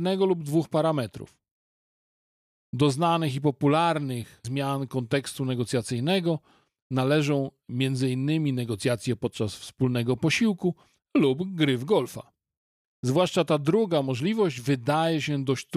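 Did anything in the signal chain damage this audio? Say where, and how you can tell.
No, nothing in the signal chain has left an audible mark on this speech recording. No stage, from capture through to playback, shows evidence of damage.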